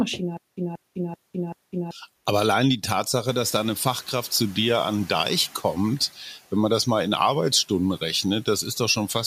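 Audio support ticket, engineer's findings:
Stutter with silent gaps, 0.37–1.91 s: likely a playback or stream stall with repeated retries. Each retry replays the same 184 ms fragment, then the buffer runs dry into 201 ms of digital silence. The cycle repeats every 385 ms, four times. Audible as an even, mechanical repeat-and-drop. The audio that belonged to that stretch is lost.

Noise suppressor catching up, 3.26–4.48 s, between "allein die" and "dir an": room noise jumps about 15 dB around 3.5 s, and the suppressor's noise estimate trails it. Reduction is weak at first, so the new noise floor comes through, then settles about 5 dB lower as the estimate adapts over 1.22 s. The noise ends up about 24 dB below the speech.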